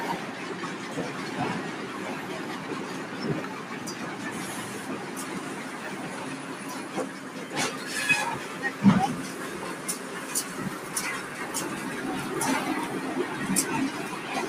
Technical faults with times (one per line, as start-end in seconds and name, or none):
0.00-14.48 noise suppressor applied to music or sounds